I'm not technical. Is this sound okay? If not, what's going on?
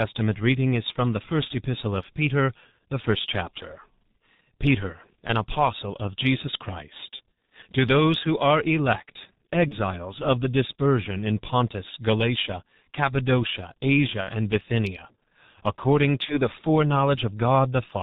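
No. The whole clip has passed through the G.723.1 codec, an early internet-telephony codec that squeezes speech into very little data. It throws away everything above about 4 kHz and rebuilds the voice from a simplified model that updates only every 30 ms. The result here is heavy: the speech sounds muffled and hoarse, and consonants are smeared rather than crisp.

There are also four short dropouts from VoIP packet loss concealed by the speech codec: at 7.16 to 7.20 s, 9.68 to 9.74 s, 14.21 to 14.30 s and 16.25 to 16.35 s. When a piece of the call went missing, the decoder guessed by repeating and fading the last sound it had. Each gap becomes a brief buzzy or hissy smear. The one at 14.21 s loses the most, with two consecutive pieces lost.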